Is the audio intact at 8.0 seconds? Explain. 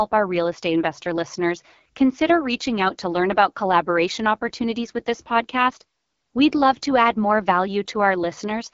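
No. At 8.0 seconds the speech carries AMR wideband (HD Voice) codec damage, and it runs through the whole clip. The codec models speech up to 6.4 kHz with a pulse-driven vocal tract filter, then fills the band above with shaped noise. Nothing is present above about 7.2 kHz. The degradation is plainly audible. The speech sounds rough and raspy, which points to one of the codec's two lowest rates, likely around 8.85 kbit/s.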